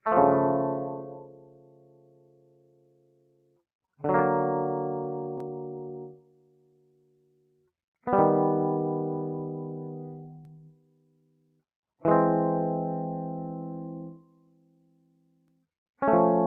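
A noise suppressor built for speech was left running on this music for the whole clip. It treats sustained tones, room ambience and reverb as noise and keeps pulling gain in and out, with the loss swinging by roughly 20 dB. Attacks pass through while held material and decays sink, so the music pumps and thins from moment to moment.

The suppressor clamps down hardest in four stretches, reaching about 19 dB below the surrounding level each time: 0.85 to 3.63 s, 6.1 to 7.71 s, 10.39 to 11.63 s, and 14.12 to 15.66 s. In each, it judged the sustained sound to be noise and cut it. Held parts drop away and tails end early, while sudden onsets still punch through. The first stretch is the longest, about three seconds in total; the others last around a second and a half.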